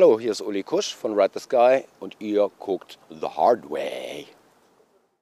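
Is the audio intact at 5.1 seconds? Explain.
Yes, the audio at 5.1 seconds is intact, with no dropout, click, distortion or other fault at that moment.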